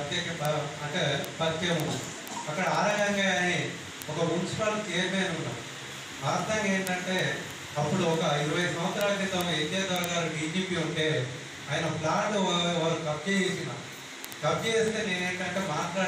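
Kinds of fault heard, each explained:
Word clock ticks: the receiving gear is running on its own clock rather than locking to the digital input, so one sample slips each time the two clocks drift past each other. Here that gives a steady tick roughly every 70 ms, about two hundred of them, from 0.14 s to 16.07 s.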